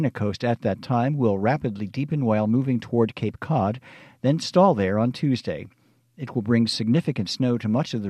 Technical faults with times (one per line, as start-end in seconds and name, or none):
none